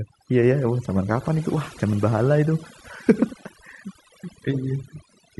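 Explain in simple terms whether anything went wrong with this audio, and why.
Overdone noise removal runs through the whole clip, from start to finish. A noise-cleaning tool was pushed too hard on a noisy recording. It shuts off any slice of the sound it mistakes for background hiss, and the softer parts of the speech get caught too. That's why the pauses drop to an unnatural near-silence with small twinkling specks.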